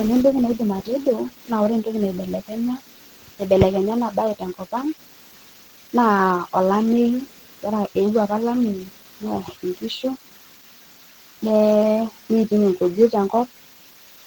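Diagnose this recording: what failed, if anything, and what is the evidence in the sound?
The codec stage failed: the speech was most likely squeezed through Opus compression at a very low rate, with the texture pointing to around 16 kbps in the encoder's hybrid speech mode. Throughout the clip the damage is plainly audible, with a muffled, hoarse quality to the voice where too few bits leave fine detail coarsely approximated. The bandwidth was not cut back: content still reaches about 20.1 kHz.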